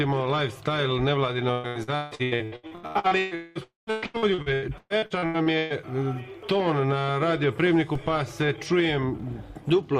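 From 1.51 to 3.34 s, repeated packet loss (robotic sound) chops the audio with 15 gaps patched by repeating prior sound; the spectrogram shows smeared, stuttering blocks, the longest gap 156 ms.

At 3.35 to 3.58 s and 3.63 to 3.90 s, a fading buzz replaces the sound, likely a long network dropout. The second ends in 140 ms of silence, seen as a flat waveform and an empty spectrogram.

From 3.91 to 5.73 s, repeated packet loss returns, with 13 concealed gaps of up to 120 ms producing the same choppiness and banded repetitions.

At 7.95 s, a DC step shifts the waveform's zero line and then decays with a roughly 2 Hz high-pass. It is heard as a low thump and appears as a brief energy burst at the bottom of the spectrogram.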